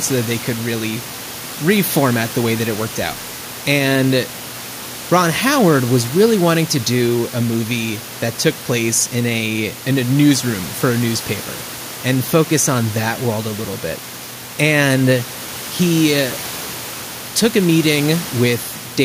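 No technical faults occur in the speech; the room's background noise sits about 16 dB below it and falls away during the pauses.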